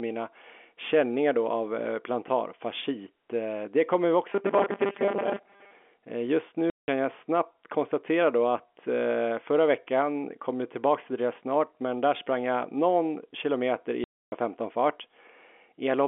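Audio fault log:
4.33–5.73 s, robotic sound from repeated short buffers: the speech turns into a stiff metallic buzz around 200 Hz, likely from late audio making a roughly 5 ms chunk loop over most of this stretch.
6.70–6.88 s and 14.04–14.32 s, packet loss filled with silence: hard-edged holes of 180 ms and 280 ms, which fits runs of 20 ms packets dropping out of the telephone-band stream.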